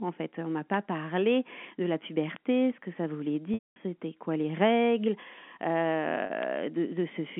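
At 0.74 s and 2.36 s a bit error spike lands in the speech: a flipped bit throws one sample, or a few in a row, far off by a power of two, giving a single hard tick. Unlike a codec glitch it is instantaneous and unrelated to the signal. From 3.54 to 3.76 s, packet loss with pitch repetition bridges a 220 ms gap, which fits about eleven 20 ms packets: the last pitch period loops briefly, fades to silence, then speech cross-fades back. Another tick follows at 4.70 s. A 40 ms loss at 6.26 s stays a short, buzzy held tone rather than a click. A final tick comes at 6.43 s. The band-limited telephone sound of the G.711 line is heard throughout.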